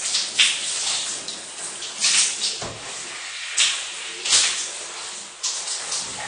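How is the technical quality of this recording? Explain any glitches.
The recording has plainly audible coding damage for its full length.

Throughout, nothing sounds above 9.6 kHz, and the audio is dull and smeared with a warbling, fizzy texture. This is likely AAC compression at a low bitrate, which fits about 32 kbps. The encoder quantises its frequency lines too coarsely for that budget. The texture tells it apart from a plain low-pass filter, which would only dull the sound.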